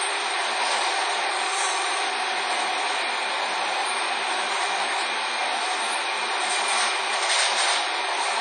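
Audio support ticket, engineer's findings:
Ringing, washy texture throughout, with hiss that swells and recedes with the sound; nothing above about 10.1 kHz. Likely WMA compression at a low bitrate, around 32 kbps: long transform blocks smear quantisation noise over tens of milliseconds, weak spectral lines zeroed.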